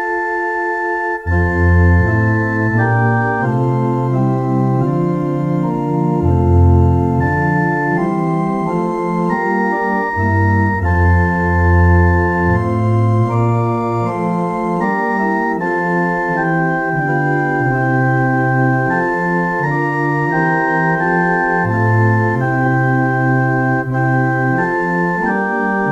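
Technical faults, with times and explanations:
Throughout, low bit depth without dither: quiet passages turn grainy and gritty, likely from rounding to about 10 bits, leaving error around 50 dB below the signal.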